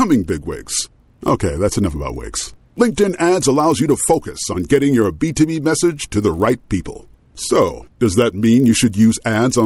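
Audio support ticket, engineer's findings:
Resampler restarted on every block, throughout the speech: 50 Hz buzz of regular ticks, present only with signal. Each 20 ms block converted in isolation, so edges miss neighbouring samples. Fits a 24 kHz to 48 kHz upsampler carrying no state between blocks.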